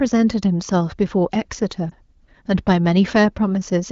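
At 1.89 to 1.94 s a lost AMR speech frame causes a brief dip or warble. The wideband decoder repeats the previous pitch and vocal-tract settings at lowered gain, which fits one missing 20 ms frame. The waveform envelope sags, and the spectrogram shows smeared, repeated harmonics.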